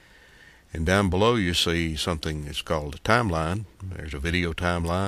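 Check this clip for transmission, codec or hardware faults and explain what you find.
No faults detected here.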